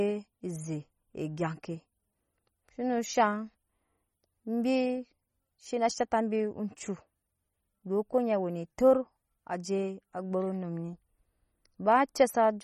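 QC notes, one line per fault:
Throughout, MP3 compression: plainly audible watery, swirling speech with metallic chirps on s sounds, smeared onsets, and nothing above 18.2 kHz. The likely cause is a bit-starved MP3 encoder zeroing weak frequency lines that flicker between frames, which fits roughly 32 kbps.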